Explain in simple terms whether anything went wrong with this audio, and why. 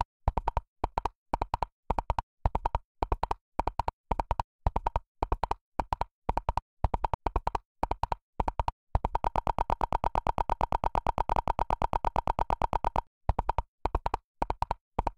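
Compressed frames skipped at 0.91, 3.88, 5.81, 7.13, 9.80 and 11.33 s: chunks of roughly 50 to 150 ms vanish, leaving short smeared blips where the sound jumps ahead.

Broken-record loop from 9.25 to 13.07 s: a 114 ms fragment repeats 35 times, likely because playback stalled and kept resending its last piece, so the real sound is lost.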